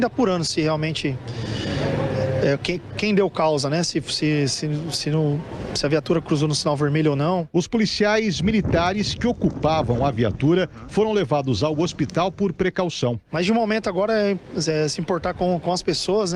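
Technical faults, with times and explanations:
No technical faults can be heard anywhere in this clip.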